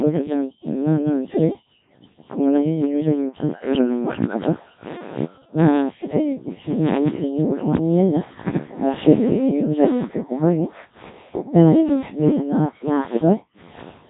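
From start to finish the speech has been through a Codec 2 vocoder, and heavily at that. Instead of carrying the actual waveform, this codec sends only pitch, voicing, energy and a rough spectral envelope, then rebuilds the voice from sine waves. That's why everything sounds robotic and buzzy. The coarseness suggests a very low rate, probably around 1.3 kbit/s, and there's nothing at all above 3.8 kHz.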